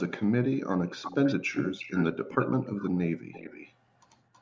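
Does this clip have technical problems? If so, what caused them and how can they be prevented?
Yes. An echo leak is audible: a faint copy of the speech trailing about 323 ms behind at 1.03–1.36, 1.52–2.05, 2.29–2.49, 2.65–2.98, 3.32–3.73 and 4.33–4.42 s. It starts roughly 10 dB below the speech and fades to near inaudible by the end. This is likely a loudspeaker on the far end whose echo canceller let some of the returned sound through. Using a headset, or giving the echo canceller a clean reference and time to adapt, would prevent it.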